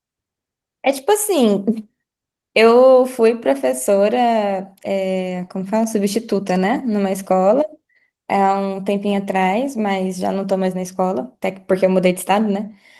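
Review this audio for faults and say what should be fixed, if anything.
Nothing to fix: no faults are audible in the speech, and the Opus voice compression at 24 kbps, hybrid mode, full bandwidth, leaves only light coding traces.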